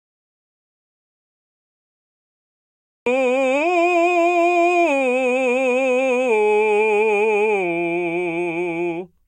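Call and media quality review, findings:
Audio dropout to silence, 0.0–3.06 s: music absent from clip start, gap already under way, then music enters mid-flow. Waveform flat and silent; spectrogram blank, no noise floor. Likely cause: input device or link lost while recorder kept writing zeros.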